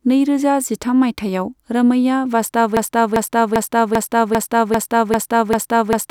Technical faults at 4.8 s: broken-record loop

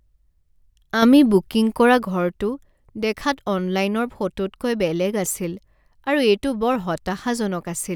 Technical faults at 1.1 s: sudden gain jump

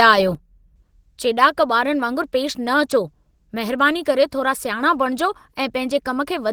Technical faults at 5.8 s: Opus compression; one channel drops out

